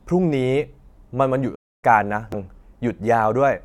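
At 1.55 s the speech stops dead in mid-flow and the output goes silent until 1.84 s. The gap lasts about 276 ms before the sound resumes. This is likely a playback stall, where the player ran short of data or was blocked.

At 2.32 s a brief glitch cuts through the speech. This is damaged data in a compressed stream. The decoder hit corrupted frames, lost sync and searched for the next valid header.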